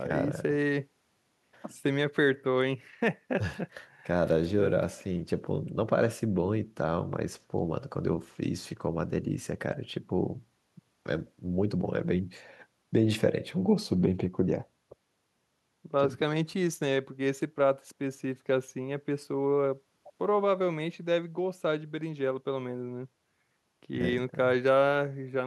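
Nothing technical stands out in this speech recording; there's no fault to point to anywhere in it.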